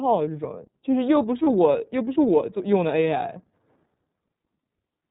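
The whole speech clip runs through the iLBC codec. It's cut off above 4 kHz and comes out clear but slightly rough and synthetic, which fits the 13.33 kbps, 30 ms frame mode. From 1.44 to 1.48 s there are lost iLBC frames. The decoder fills that gap by repeating the last pitch cycle with noise, giving a short buzzy held vowel before snapping straight back.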